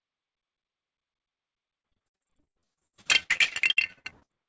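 Repeated packet loss (robotic sound) runs from 1.80 to 4.31 s. Packets kept going missing or arriving late. Each gap, the longest 74 ms, was bridged by stretching the previous sound, so roughly 42% of that stretch is patched and sounds choppy.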